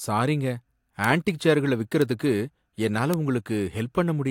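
Bit error spikes at 1.04 s, 2.02 s and 3.14 s break into the speech as single sharp ticks. The first lands just before "ஆன்ட்டிக் சேர்களை", the second just after it, and the third stands alone. Each is one corrupted sample whose value leapt by a power of two and fell straight back. The spikes peak at about -3, -9 and -3 dBFS. They are broadband clicks with no relation to the voice beneath them.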